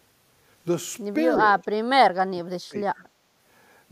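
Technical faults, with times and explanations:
1.62–1.67 s and 2.25–3.0 s, speech suppressed in double talk: the speech briefly dips by about 15 dB, then sinks by roughly 30 dB for most of 2.25–3.0 s, with some sound still coming through. An echo canceller likely turned it down while the far side was talking, so it is a partial duck rather than packet-loss silence.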